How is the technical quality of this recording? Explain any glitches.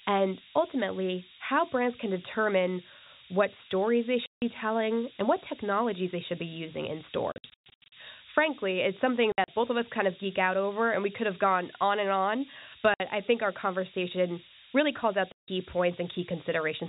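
The recording is quite poor. A harsh hiss runs through it, and the speech drops out in several places.

Low bit depth with noise shaping affects the whole clip. Very few levels are used, which fits about a 4-bit signal. The rounding error is pushed toward high frequencies. The result is a loud, thin hiss that rises sharply toward the top of the band, only a few dB below the speech.

Packet loss filled with silence causes the gaps. They occur at 4.26 s, at 7.32 to 7.92 s, at 9.32 s, at 12.94 s, and at 15.32 s. Lost stretches were replaced by silence. The gaps come in steps of 20 ms, which fits 20 ms packets. Each hole has hard edges. The first comes after "determine what stories they" and lasts 160 ms. The second follows "should be using in" and breaks into several short holes, the longest 120 ms. The fourth is 60 ms, between "gone on and on" and "I think our conversation". The last runs 160 ms. 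The telephone coding underneath limits the sound to a narrow band below 4 kHz.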